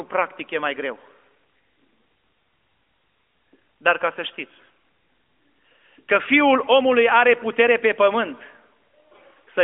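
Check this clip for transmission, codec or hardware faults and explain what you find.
No faults turn up in this speech: it carries the character of an AMR narrowband mobile codec link working as intended, with the band held to the 250 Hz to 3.4 kHz telephone range, nothing above 3.6 kHz, and only the light coding texture that fits the codec's highest, 12.2 kbps mode.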